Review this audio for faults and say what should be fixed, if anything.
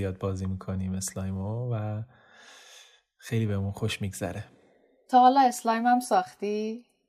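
No faults; nothing to fix.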